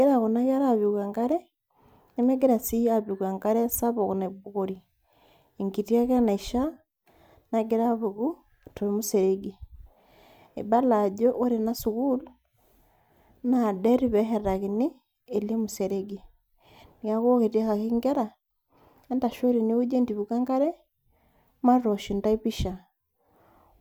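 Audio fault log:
Nothing to log here, as this speech recording comes across without any technical problems worth noting.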